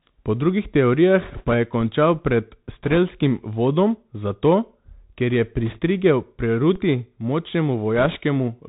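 Speech heard through the Bluetooth CVSD headset codec: the band stops at 4 kHz, s sounds turn scratchy, loud bright moments distort as the adaptive step fails to keep pace with the waveform, and a grainy hiss sits beneath everything. That hiss stays constant, unlike transmission errors, which come and go. Bit errors on the Bluetooth voice link add bursts of rushing crackle at 1.21–1.55, 2.83–2.98, 5.66–5.79 and 7.96–8.16 s, with an error rate of a few percent. Because each CVSD bit carries little weight and its effect fades quickly, these bursts are diffuse noise rather than the sharp clicks of dropouts. A DC step at 1.81 s and another at 6.76 s shifts the waveform's zero line, which is heard as a single low thump while the speech carries on unchanged. The offset then drains away through a roughly 20 Hz high-pass, which sets these apart from the sustained crackle of the bit errors.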